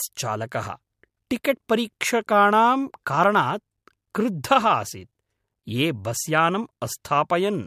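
Listening to the speech recording turned up nothing that stood out as a technical problem at any point.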